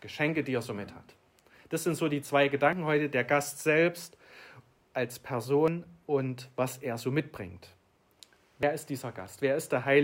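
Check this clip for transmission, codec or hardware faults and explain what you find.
There is one fault, repeated three times. It is audio missing between chunks, at 2.73, 5.68 and 8.63 s. At each point a short slice of sound, around 50 ms, is gone. The audio on either side is butted straight together, with no gap of silence. The steady spacing is the clue. It likely comes from processing in 3-second chunks, where a little audio is lost at each handover. The result is a small, regular skip in the sound.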